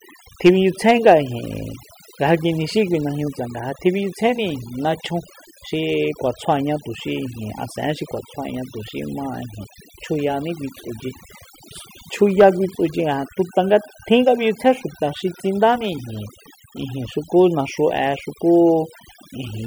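From start to end the speech shows overdone noise removal: the noise reduction was set too aggressively, gating individual frequency bands near its noise estimate. Quiet speech detail is removed with them, leaving near-silent gaps with twinkling specks.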